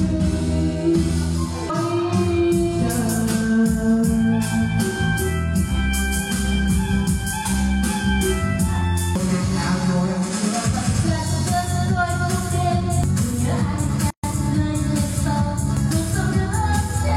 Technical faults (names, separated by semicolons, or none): gap at a join of encoded pieces